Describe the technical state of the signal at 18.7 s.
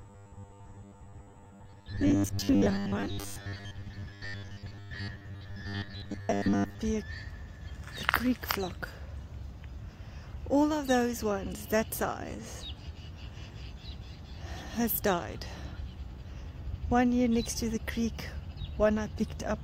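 At 18.7 s the signal is intact, with no audible fault at that point.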